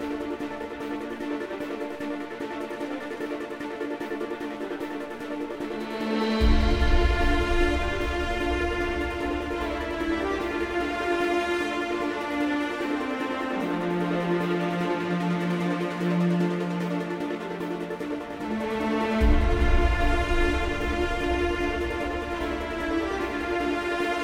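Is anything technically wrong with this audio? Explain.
No, nothing is technically wrong with this audio.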